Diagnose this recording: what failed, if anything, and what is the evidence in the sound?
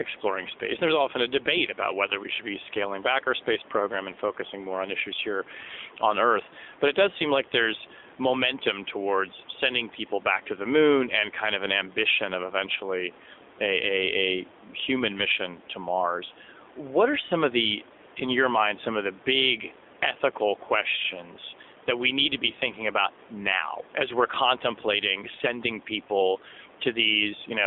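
Codec stage: an AMR narrowband mobile codec, consistent with a 7.4 kbps mode, limits the speech to 250 Hz to 3.6 kHz throughout and leaves it plainly buzzy and synthetic.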